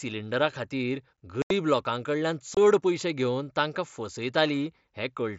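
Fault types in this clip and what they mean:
Unconcealed Bluetooth headset packet loss: the speech drops out with hard edges for about 82 ms at 1.42 s and about 22 ms at 2.55 s, just before "पयशे घेवन तांकां". Headset voice packets went missing and nothing filled the gaps.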